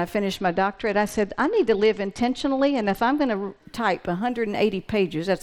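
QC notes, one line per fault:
0.36–3.65 s, Bluetooth SBC bit pool drop: starved top sub-bands dull the treble and coarse quantisation adds grit. The spectrogram shows the upper band emptied, then refilled.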